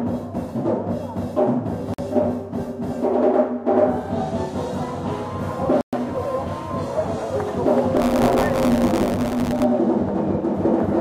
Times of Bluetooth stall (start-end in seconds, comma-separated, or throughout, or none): 1.94-1.99, 5.81-5.93